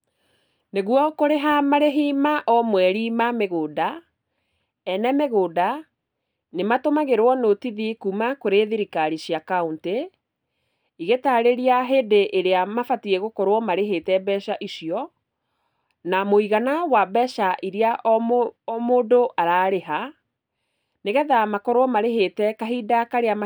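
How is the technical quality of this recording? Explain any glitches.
Nothing to worry about here, since I couldn't hear a single glitch anywhere in the recording, so there's nothing to explain.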